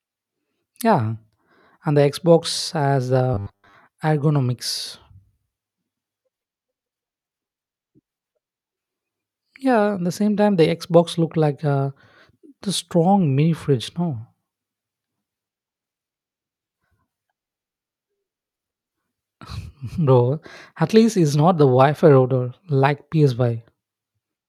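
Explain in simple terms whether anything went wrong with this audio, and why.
From 3.34 to 3.74 s the speech turns into a stiff, metallic buzz at about 100 Hz, still loosely following the words. This is robotic sound from repeated short buffers, likely because audio arrived too slowly and a roughly 10 ms scrap was replayed to fill gaps for most of that stretch.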